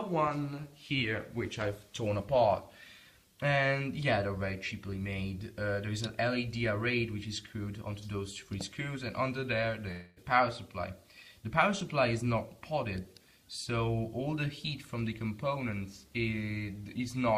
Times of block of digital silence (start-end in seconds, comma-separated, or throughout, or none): 11.81